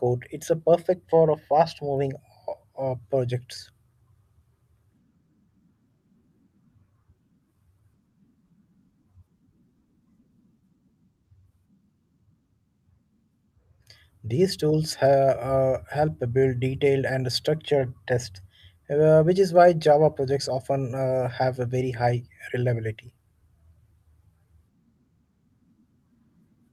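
No technical faults can be heard anywhere in the recording; the speech signal stays continuous and stable throughout.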